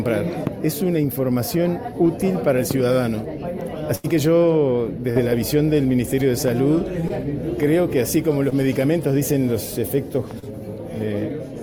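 From 3.95 to 4.06 s there is a burst of packet loss. About 80 ms of audio never arrived, and the receiver bridged it by extending the last sound for roughly 85 ms while turning it down. The result is a held, fading buzz or hiss, followed by a jump where the audio resumes with that stretch missing. On a spectrogram, the final spectrum appears frozen as flat horizontal bands that dim before an abrupt restart. The waveform shows a smoothly decaying envelope.

Short concealed packet loss follows at 5.12 s (about 40 ms lost), 7.08 s and 8.50 s (about 20 ms each), and 10.39 to 10.52 s (about 40 ms lost). Each time the receiver patched the hole from the preceding sound and blended back, producing a brief smear or wobble. The last repair also adds roughly 15 ms of time. Spectrograms show narrow columns of repeated harmonics or blurred noise. Waveforms show a short, overly regular patch.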